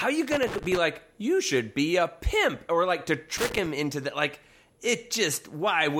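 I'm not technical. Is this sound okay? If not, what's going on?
No. There are two bursts of loose connector crackle, from 0.32 to 0.77 s and from 3.37 to 3.66 s. A worn or dirty plug or socket is briefly losing contact, chopping the speech into scratchy crackle. Reseating or cleaning the connector fixes this.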